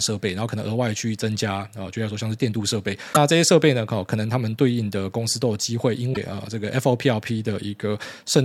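Speech clip with damaged data in a compressed stream: short disruptions at 3.10–3.17 s and 6.10–6.17 s, where the decoder misreads corrupted frames before resyncing.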